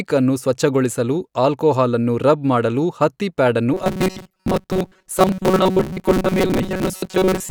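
From 3.74 s, just after "ಮಾಡಲು ಹತ್ತಿ ಪ್ಯಾಡ್ ಅನ್ನು", to 7.51 s, the speech becomes robotic from repeated short buffers: a rigid metallic buzz fixed at 188 Hz. Late-arriving audio is the likely cause, with roughly 5.3 ms chunks replayed over most of the real signal.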